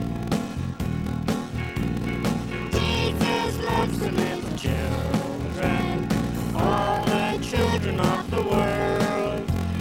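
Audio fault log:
Throughout, block size mismatch (padded): a steady buzz at 43.1 Hz runs under the audio, and the material plays at 0.861 times its normal speed while keeping roughly its normal pitch. One stage delivers blocks shorter than the next stage reads, and the shortfall in each block is filled with silence. The buzz is that repeating gap. The buzz rate fits a 1024-sample read block, with about 880 samples of real audio in each one.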